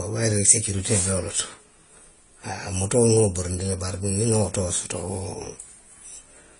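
Throughout the speech, a hard ceiling at about 10.5 kHz leaves the spectrogram empty above it, while smeared, warbling high detail carries two layered kinds of coding artefact, the likely result of transcoding between lossy codecs, consistent with a low-bitrate Vorbis encode re-encoded to AAC-LC.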